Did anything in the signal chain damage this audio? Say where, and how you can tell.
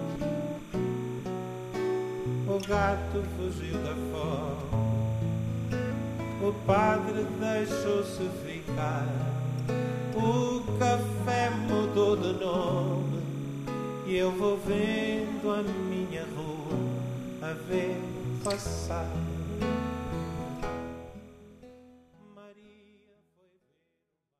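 Yes. Timecode bleed runs throughout. It is a chirping warble near 1 and 2 kHz, about 25 dB below the sound. It points to 29.97-frame code leaking through analogue wiring.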